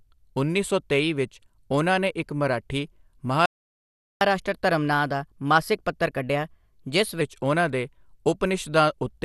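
MP2 compression runs through the whole recording: nothing is present above 12.1 kHz, and the speech sounds dull, with a gurgling, grainy roughness. The likely cause is MPEG Layer II coding at a rate around 80 kbps, too few bits to keep the upper sub-bands or to quantise the remaining ones finely.

A playback stall at 3.46 s silences the speech mid-flow for about 0.75 s, until 4.21 s. The likely cause is that the player ran short of data or was blocked, then resumed where it had stopped.

Catch-up at higher speed follows from 4.21 s to 7.21 s. The player works through its backlog 1.1 times faster by resampling, so the speech is hurried and raised by about a semitone and a half. The hurried stretch begins with "ਉਹਨਾਂ ਦੇ".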